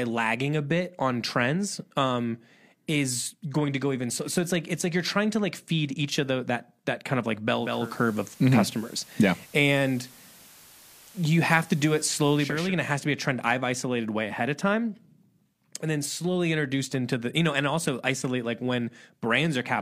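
A speech clip in which, at 7.53 s, a hiss rises under the sound over roughly half a second, the level shifts by about 3 dB, and the character stays noisier until 12.75 s, when it crossfades back. This is digital radio blending to analogue: the receiver lost the digital stream and faded across, over about 450 ms, to the same station's FM broadcast, whose noise floor sits roughly 25 dB below the signal, then returned once reception recovered.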